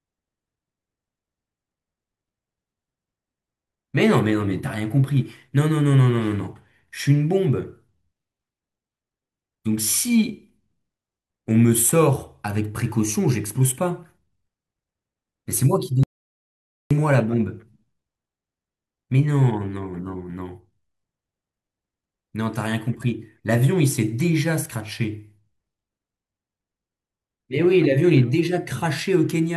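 At 16.03 s the speech cuts off abruptly into dead digital silence, with no room tone, and resumes mid-flow at 16.91 s, losing about 0.87 s. This audio dropout to silence likely came from the input link or device briefly failing while silence kept being recorded.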